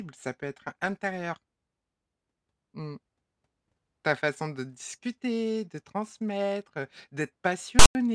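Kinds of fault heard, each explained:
File tags played as audio: near the end, from about 7.79 to 7.95 s, a block of text metadata gets decoded as if it were samples, so you hear a harsh, lopsided rasp that snaps in and out, then drops to dead silence where the tag's zero padding runs.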